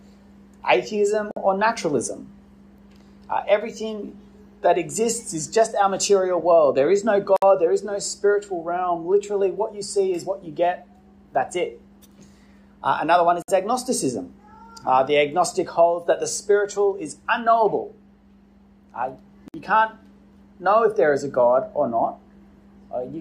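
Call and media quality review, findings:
Gap at a join of encoded pieces: 1.31–1.36 s, 7.36–7.42 s, 13.42–13.48 s, 19.48–19.54 s; 53 ms, then 59 ms gaps every 6.0 s. Segment concatenation: untrimmed encoder start delay and last-frame padding leave dropouts; sound resumes where it stopped.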